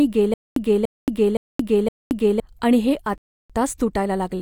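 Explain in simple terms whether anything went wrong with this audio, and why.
Two things went wrong. The playback likely stalled and kept retrying, causing a stutter with silent gaps: from 0.34 to 2.4 s a 0.29 s scrap of speech repeats four times, each followed by about 0.22 s of dead silence, and the missing speech is lost. Then the player ran out of downloaded audio, a rebuffering stall: sound stops from 3.18 to 3.50 s and resumes where it left off, adding about 0.32 s.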